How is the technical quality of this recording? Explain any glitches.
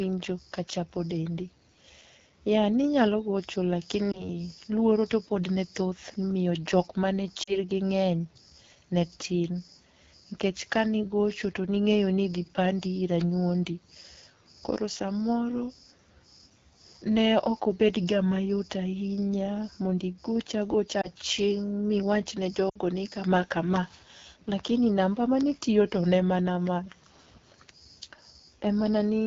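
The technical quality is poor. The speech is coded with the AMR wideband (HD Voice) codec at 8.85 kbit/s. At this low rate the model-based coding sounds plainly rough and raspy throughout.

Lost AMR speech frames cause brief glitches at 4.11 s (before "luoro to pod ne"), 7.43 s (after "jok mane"), 21.01 s and 22.69 s (before "ni kama kama"). The decoder repeats the last good settings with falling gain, so a single lost frame is a short dip or warble, while the longer runs drop to near silence. The missing audio runs about 20, 40, 20 and 60 ms, which fits one to three lost frames.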